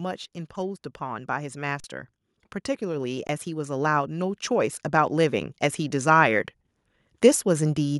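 A speech recording with two underruns with held sample, at 1.80–1.84 s and 3.27–3.29 s. In each the output buffer ran dry and the converter held its last value, so the sound freezes into a flat level for 40 ms and then 20 ms. Live audio went missing during each gap. Between 2.79 and 6.47 s, automatic gain rising lifts the level by about 7 dB. The gain control judged the input too quiet and raised it gradually, so speech and background swell together over those seconds.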